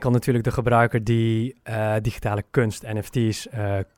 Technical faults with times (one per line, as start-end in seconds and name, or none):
none